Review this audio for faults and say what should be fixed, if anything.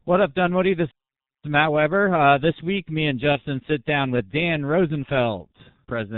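G.723.1 codec damage runs through the whole speech clip. The sound is heavily muffled and hoarse, with smeared consonants, which fits a bitrate around 6 kbit/s. A spectrogram shows an empty band above 4 kHz and blocky, slowly changing formants. Prevent it by carrying the call on a wideband codec.

VoIP packet loss concealed by the speech codec occurs from 3.32 to 3.41 s. One 30 ms frame appears to be missing, and the decoder fills the gap by extending its last pitch and filter into a fading buzzy tone or coloured noise. The degradation persists briefly after the gap. A waveform shows a smooth, repetitive stretch with dropping amplitude, and a spectrogram shows frozen, blurred harmonics. Prevent it with a larger jitter buffer or forward error correction.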